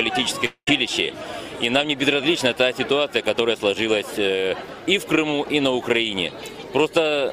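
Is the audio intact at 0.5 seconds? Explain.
No. From 0.45 to 0.69 s the last sound is stretched into a fading buzz or hiss for about 0.2 s, then falls silent before the audio resumes, skipping roughly 220 ms. This is likely a long network dropout, where the receiver concealed missing packets.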